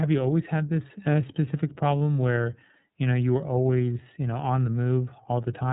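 From start to end the speech carries the sound of the iLBC codec, a narrowband VoIP coder. Nothing above 3.8 kHz survives, so the top of the spectrum is gone and sibilants lose their edge. The rough, slightly synthetic texture fits 30 ms frames at around 13.33 kbps, each frame's excitation coded independently of the one before. This codec damage is plainly audible across the whole clip.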